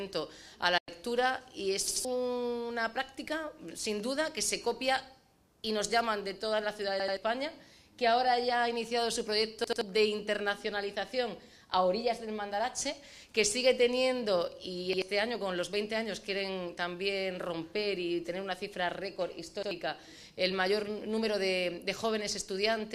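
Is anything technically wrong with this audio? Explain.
Yes. From 0.78 to 0.89 s there is a digital broadcast dropout. The receiver stopped getting valid frames and muted. The sound fades out over about 8 ms and leaves a silent hole of roughly a tenth of a second, which fits three lost frames. Unlike a stutter, the gap is empty, and that audio is simply gone.

There is also a repeated buffer at 1.88–2.05, 7.00–7.17, 9.64–9.81, 14.93–15.02 and 19.63–19.71 s. When fresh audio came late, the device replayed an 85 ms chunk, which fits a 4096-sample buffer. That chunk plays twice more in the first three events and once more in the last two, so each event is heard as a stutter with hard joins rather than silence.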